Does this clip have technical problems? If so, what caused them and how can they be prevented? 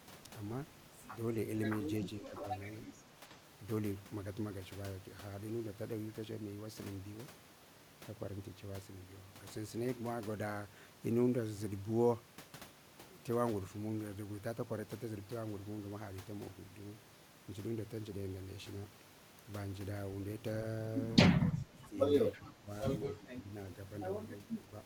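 Yes. Speech suppressed in double talk is heard five times, at 2.2–2.46 s, 21.5–21.98 s, 22.37–22.7 s, 23.18–23.48 s and 24.43–24.69 s. The likely cause is an echo canceller that could not separate the local talker from loudspeaker echo while both sides spoke, and so pulled everything down. The speech dips by about 15 dB (about 10 dB in the last event) in short stretches of a few hundred milliseconds. A canceller with better double-talk detection, or a headset in place of the loudspeaker, prevents this.

An echo leak occurs at 22.32–22.41 s, likely because the loudspeaker end's echo canceller left part of its microphone pickup unremoved and sent it back. It is a faint, delayed copy of the speech, lagging by 319 ms and about 25 dB below the main signal. It arrives as a brief scrap just as the suppression at 22.37 s begins. Using a headset or tuning the echo canceller to the room's echo path prevents it.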